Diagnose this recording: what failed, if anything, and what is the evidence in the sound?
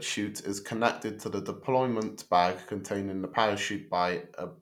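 Nothing in the signal chain has failed: the speech signal stays continuous and stable, with nothing audible that points to trouble at any stage from capture and conversion through transmission, storage or playback.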